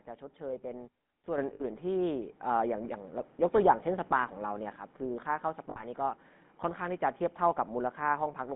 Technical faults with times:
0.00-8.56 GSM full-rate codec
1.38 microphone volume stepped up
1.54-1.62 lost GSM frames
2.40 microphone volume stepped up
3.42 microphone volume stepped up
5.70-5.81 lost GSM frames

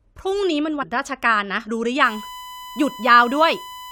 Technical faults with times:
0.81 damaged data in a compressed stream
2.04-3.92 USB whine

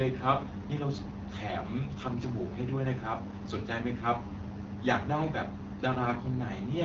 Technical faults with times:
0.00-6.85 AMR wideband (HD Voice) codec

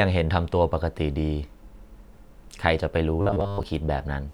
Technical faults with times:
3.21-3.63 robotic sound from repeated short buffers

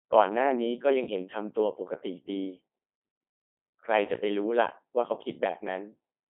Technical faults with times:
0.00-6.29 Codec 2 vocoder

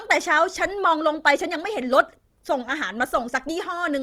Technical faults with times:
0.00-4.02 Opus compression

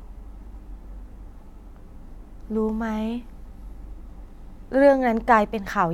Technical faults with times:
none

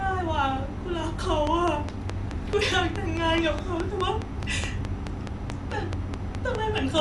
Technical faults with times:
0.00-7.01 Dolby Digital compression
1.47-6.99 train of clicks

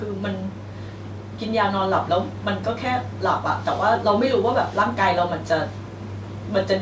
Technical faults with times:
none

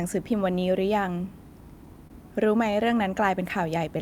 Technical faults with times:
2.07-2.12 short stall from a late packet

